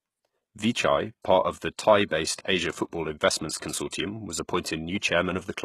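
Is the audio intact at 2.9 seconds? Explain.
No. At 2.9 seconds, as throughout the clip, this is low-bitrate audio saved at a high bitrate. It was likely first squeezed through a very low-bitrate codec and then re-encoded as a high-bitrate MP3. The larger file cannot restore what the first pass discarded. The speech stops sharply above 12.3 kHz, so it sounds dull despite the generous bitrate. That fits a source near 16 kbit/s.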